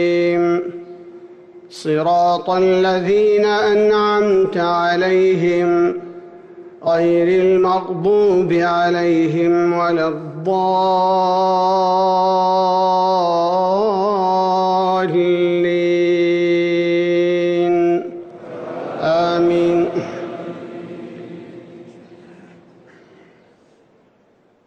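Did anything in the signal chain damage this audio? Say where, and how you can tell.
Yes, at the codec: compressed frames were skipped at 6.83 s and 9.62 s. The audio jumps about 100 ms ahead, roughly two 46.4 ms frames.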